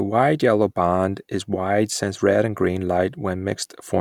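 No technical faults can be heard anywhere in the speech recording. There is nothing in the audio that needs a time mark or an explanation.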